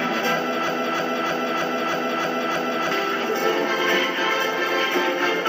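From 0.68 s to 2.91 s, a fragment of about 313 ms repeats seven times back to back, each copy identical, so the sound sticks in place and stutters rhythmically before normal playback resumes. This is a broken-record loop. The likely cause is that the player, encoder or stream stalled and kept resending the last piece it still held, so whatever audio belonged in those two seconds never arrives and is lost.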